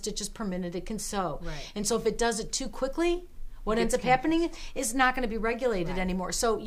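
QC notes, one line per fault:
Nothing stood out on listening, so there is nothing to log.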